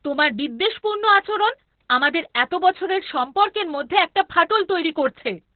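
Across the whole clip the speech has passed through Opus voice compression running in its SILK linear-prediction mode, squeezed to a rate that sounds like about 8 kbps. At that budget the coder drops to narrowband, discarding everything above 4 kHz, and quantises the excitation coarsely. The damage is heavy: the voice comes out muffled and boxy, with a hoarse, buzzy roughness and a faintly robotic edge from start to finish.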